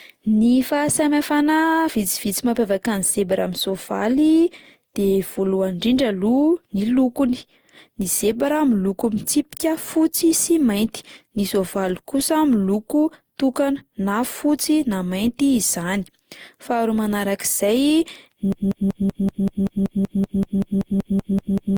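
From the start, the speech has a swirly, hollow, smeared quality that sounds worse than a single pass through a moderate-bitrate codec would leave, and consonant attacks come across soft and blurred. That points to generation loss, most likely from the audio being run through a lossy codec like Opus, at something near 64 kbit/s, several times over. Each re-encode quantises on a shifted frame grid, so the noise and spectral gaps pile up rather than staying put.

Then at 18.52 s a broken-record loop kicks in and runs right to the end. A fragment of about 0.19 s repeats back to back, 17 times. The stuttering sound suggests the player or stream stalled and kept re-sending the last chunk it had in memory, so whatever should have played during those final seconds is simply gone.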